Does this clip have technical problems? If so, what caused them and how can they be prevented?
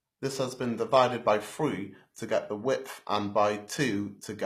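Yes. Across the whole speech clip the treble sounds bright but not quite right: s sounds come out gritty and lispy, with a metallic edge up top. That's most likely HE-AAC compression, where only the lower spectrum is really coded and the highs are rebuilt by spectral band replication, copying lower bands upward under a coarse envelope. The rebuilt harmonics don't line up with the real ones, and the damage is plainly audible, which fits a low bitrate around 24 kbps. To prevent it, export at a higher bitrate or switch to plain AAC-LC or Opus so the treble is actually coded.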